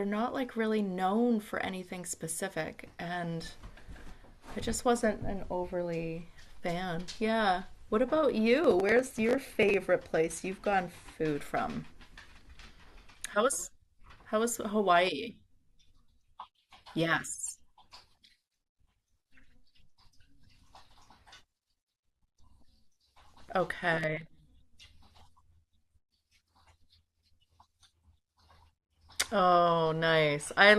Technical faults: processor overload crackle

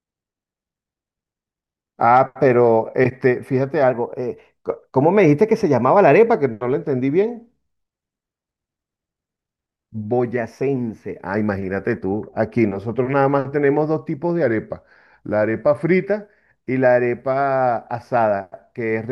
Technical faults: drift correction step

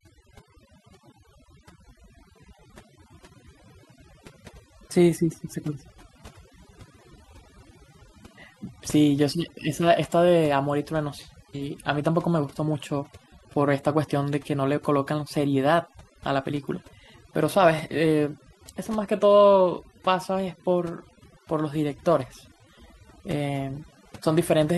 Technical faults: overdone noise removal

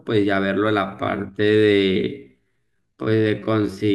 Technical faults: time-stretched section

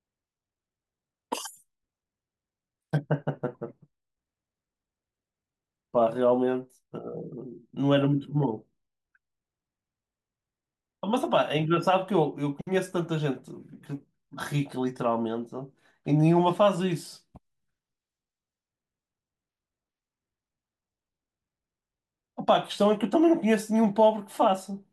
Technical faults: none

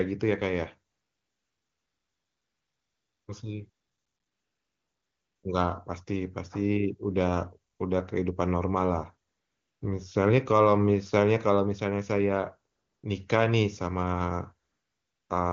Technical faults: AMR comfort noise

